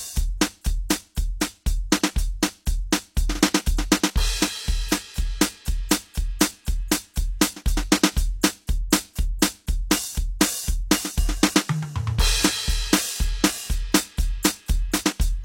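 At 9.39 s, just before a sharp attack in the music, a brief hiss rises out of the quiet for about 28 ms, to 9.42 s. This is pre-echo: the transform codec spread quantisation noise across the whole block, so noise sized for the loud attack leaks backward into the silence ahead of it, leaving the attack soft and smeared. Unlike a genuine echo or reverb tail, the artefact arrives before the event rather than after it.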